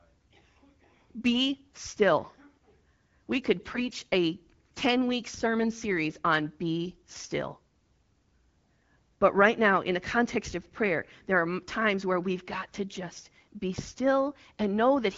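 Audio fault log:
3.71–3.84 s AMR bit errors: for about 130 ms the speech keeps its pitch and level but turns hoarse and gargly, as corrupted bits in several frames misplace excitation pulses and skew gain and spectrum values. Unlike packet loss, nothing drops out or goes silent.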